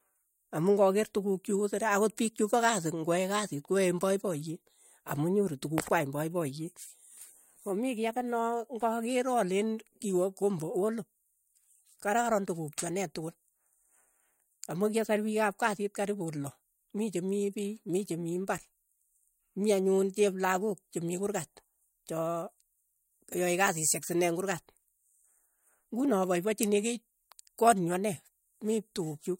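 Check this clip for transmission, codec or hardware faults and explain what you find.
Checking this clip turns up no faults to explain.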